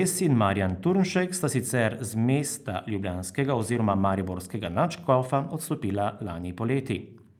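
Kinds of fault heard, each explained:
No technical faults can be heard in this speech recording.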